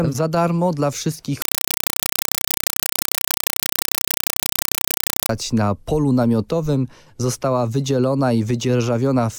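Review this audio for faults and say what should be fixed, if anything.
From 1.42 to 5.29 s, a compressed stream was played as audio: an AC-3 bitstream, consistent with a 192 kbps stream, reached the output undecoded. Each frame becomes a 4 ms noise burst then silent padding, 31.25 times a second, heard as very loud, chattering static. To prevent it, have the receiver decode Dolby Digital or set the source to output PCM.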